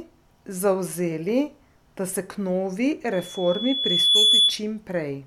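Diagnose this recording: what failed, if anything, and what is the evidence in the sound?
What failed is a loudspeaker feedback squeal in the analogue side, where the mic hears its own speaker. From 3.12 s a tone at 3.4 kHz swells over about a second to roughly 10 dB above the speech, lasting until 4.61 s. Loop gain topped unity there and ran away.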